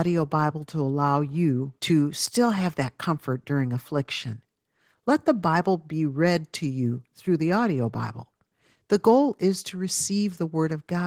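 Opus voice compression runs through the whole speech clip, with plainly audible damage. The sound is consistent with hybrid mode, where SILK's linear-prediction coder handles the lower band and CELT adds a thin upper layer, at a rate that fits about 16 kbps in 20 ms frames. The coarse excitation gives a hoarse, slightly robotic buzz. That buzz separates it from a simple low-pass filter, which would only dull the top end without roughening it.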